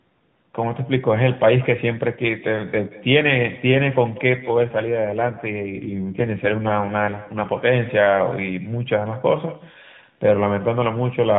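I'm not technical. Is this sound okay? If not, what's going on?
No. There are two problems.

The first is echo with no canceller, and it runs through the whole clip. The person on the other end seems to have the call on a loudspeaker. Their microphone picks your speech back up and sends it down the line, and nothing removes it. So every phrase is followed about a fifth of a second later by a fainter, thinner copy of itself, like a short shadow trailing the speech.

The second is an AMR rate drop from 4.46 s to 7.69 s. This is a mobile call using the AMR narrowband codec, which normally gives clear, slightly boxy phone-quality speech. During that stretch the mobile link appears to weaken. The network then tells the codec to send the speech in a more compressed form so it can spend more of its capacity on protecting against errors. You don't hear a dropout or a gap. Instead the speech turns rougher, buzzier and more artificial, and then it returns to normal phone quality after 7.69 s.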